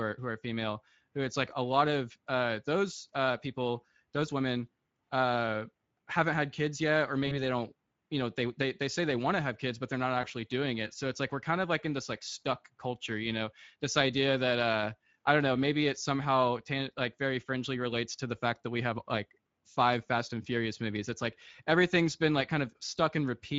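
Speex codec damage runs through the whole speech clip. It is plainly audible. Speex is a CELP codec from older VoIP and game chat. It models the voice as a filter driven by a coded excitation. The bit budget here fits a rate of roughly 17 kbps, and the excitation is coded coarsely. What you hear is the codec's own rough, synthetic texture laid over the voice, not a clean reproduction.

VoIP packet loss concealed by the speech codec occurs first from 7.27 to 7.38 s. About 40 ms of audio is missing, which fits two lost 20 ms frames. The decoder filled the gap by extending its last pitch and filter, turning the gain down frame by frame. The sound smears into a decaying tone or coloured noise. The voice stays weak or distorted for a short while after the stream returns, because each frame builds on the one before.

The same fault returns from 10.21 to 10.27 s. This time about 20 ms is lost, which fits a single frame. 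The gap is shorter, so the concealed stretch and its fade are briefer. Recovery again lags a little, since the decoder must rebuild its state from the concealed frame.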